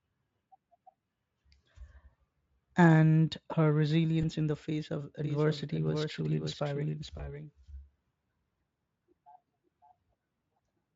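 At 4.21 to 4.25 s, between "and her" and "in the face of", there is VoIP packet loss concealed by the speech codec. The sound fits a single lost 20 ms packet. The decoder filled the gap by extending its last pitch and filter at falling gain. That gives a short buzzy or noisy smear. The speech stays weak or distorted just after, because each rebuilt frame depends on the one before. The same thing recurs at 7.17 to 7.32 s and at 10.57 s. Each is a brief blur with a soft recovery. The Speex coding around these events adds little or no audible damage of its own.

From 5.24 s, right after "in the face of", a doubled audio track begins and runs to the end. A second full-band copy trails the original by roughly half a second. It sits about 5 dB quieter. It has no reverb tail or room colour, so it sounds like a clean echo. It comes in abruptly. This is likely the same signal captured again through a slower path and mixed back in.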